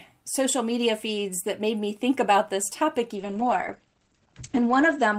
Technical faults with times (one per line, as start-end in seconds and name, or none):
3.16-5.19 call bitrate drop